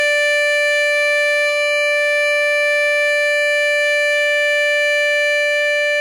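The music comes through with no technical faults to be heard anywhere in the clip.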